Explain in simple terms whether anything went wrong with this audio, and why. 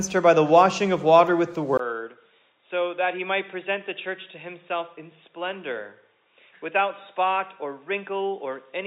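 At 1.77 s, after a tiny gap, the sound turns dull and quieter, likely an input switched to a poorer device that drops everything above 3.8 kHz.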